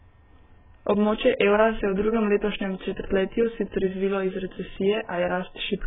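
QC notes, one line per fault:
Throughout, AAC compression: nothing above 3.8 kHz, sibilants warble and smear, likely AAC-LC near 8 kbps; a simple low-pass filter would dull without warbling.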